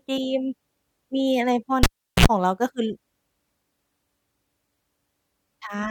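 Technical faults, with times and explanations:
1.83–2.26 s, cable pulled and plugged in: a pop as the connection breaks, then about 374 ms of near silence, then roughly 60 ms of 60 Hz mains buzz while only the tip touches, and a second pop as the speech returns. The waveform shows a spike, a flat gap and another spike. The spectrogram shows 60 Hz harmonic stripes just before the speech comes back.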